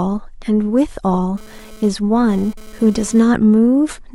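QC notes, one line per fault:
1.37–3.21 s, GSM phone buzz: a hard, raspy buzz at about 217 Hz sits under the speech, thick with harmonics and unrelated to what is said, around 25 dB below the signal. A nearby 2G handset is bursting its transmitter 217 times a second, and the audio circuitry rectifies those radio pulses into audible buzz. Here it arrives and leaves within the clip rather than persisting, which fits the phone being busy with a data transfer rather than a call.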